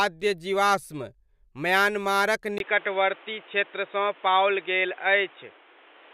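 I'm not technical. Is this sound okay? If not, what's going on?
No. At about 2.58 s, the recording likely switched its input to a poorer device, perhaps another microphone or a headset. After a brief gap, the speech sounds duller and boxier to the end, with nothing above 3.8 kHz, plus faint new background noise, while the overall loudness stays similar.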